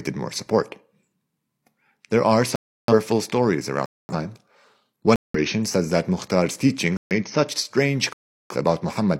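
Five silent gaps cut into the speech, each a corrupt frame muted. The decoder rejected damaged compressed frames and the player filled them with silence. The gaps start abruptly at 2.56–2.93 s, 3.86–4.14 s, 5.16–5.39 s before "says that", 6.97–7.12 s before "such strange", and 8.13–8.56 s after "such strange". Their lengths of 0.15 to 0.43 s point to runs of about three to eight frames. The timing of the surrounding audio is kept.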